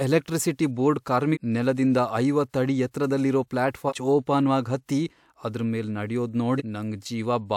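Speech with compressed frames skipped at 1.33–1.37, 3.88–3.93 and 6.57–6.62 s. The jumps drop about 0.5, 0.4 and 0.4 s, in 46.4 ms frames.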